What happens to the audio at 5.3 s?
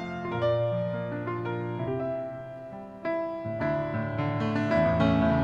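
Nothing goes wrong at 5.3 s; the audio carries on intact through that moment with no dropout, click or other fault.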